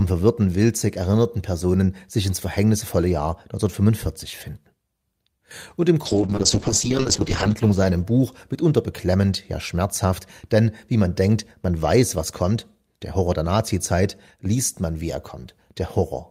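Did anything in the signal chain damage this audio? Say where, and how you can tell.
Yes. From 6.07 s to 9.09 s the speech turns rough and watery, loses its high frequencies and sounds muffled, at its worst for about 1.2 s before clarity returns. This is a call bitrate drop at the codec stage, driven by the network. The call's bandwidth estimate fell, so the encoder was given far fewer bits, which fits a fall from around 40 kbps to about 8 kbps. At that rate Opus quantises coarsely and trims the upper band.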